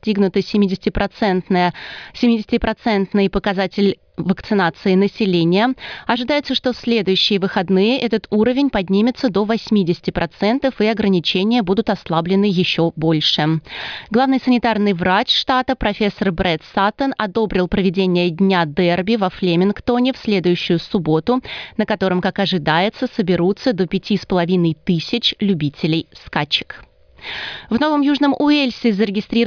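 No technical faults can be heard anywhere in this recording.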